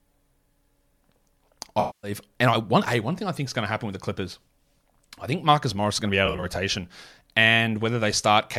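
AAC frame loss with concealment occurs twice in this speech. From 1.80 to 2.11 s a continuous block of about 235 ms never reached the decoder, consistent with roughly eleven consecutive frames, so it rebuilt the gap from the last good spectrum. The sound there turns smeared and noisy and sags in level. From 6.25 to 6.44 s the losses are scattered, the longest gap around 40 ms, giving brief phasey, grainy flickers.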